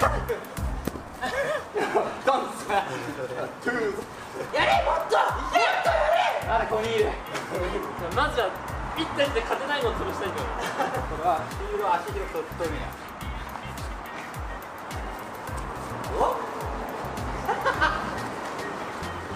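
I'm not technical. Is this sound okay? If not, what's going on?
Yes, this sound is okay. Nothing in it stands out as a technical problem, so there's nothing to fix.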